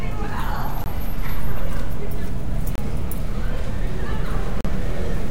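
At 0.84–0.86 s, 2.75–2.78 s and 4.61–4.65 s, blocks of digital silence of 20, 26 and 40 ms drop in, probably where output samples weren't delivered. Each is heard as a short hole in the sound. The waveform shows flat lines with hard edges, and the spectrogram shows blank vertical gaps.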